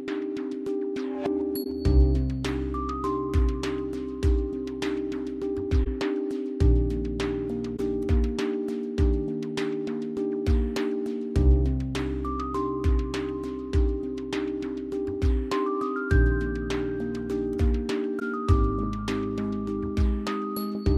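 The audio has four short concealed corrupt frames, at 1.63–1.67 s, 5.84–5.87 s, 7.76–7.79 s and 18.19–18.22 s. Each lasts roughly 30 to 36 ms, which fits a single damaged AAC frame that the decoder detected and covered by muting or by reusing a scrambled copy of the previous spectrum. On a spectrogram each shows as a thin vertical gap or blurred column; the waveform shows a narrow, gently tapered drop in amplitude.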